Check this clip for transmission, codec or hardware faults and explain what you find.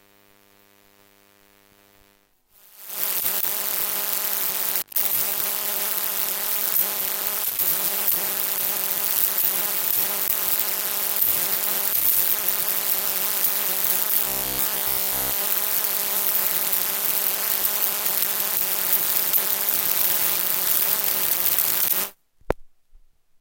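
One fault stands out: robotic sound from repeated short buffers, from 14.22 to 15.40 s. The sound turns into a rigid buzz at 66.7 Hz, likely from the player repeating a 15 ms buffer for most of that stretch while real audio is skipped. A spectrogram shows evenly spaced harmonics at 66.7 Hz intervals, and the waveform shows the same short cycle repeated.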